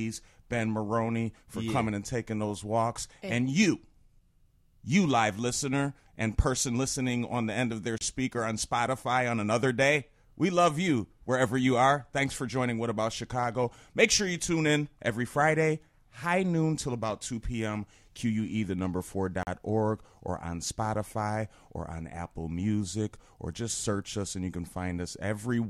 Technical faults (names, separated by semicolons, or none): block of digital silence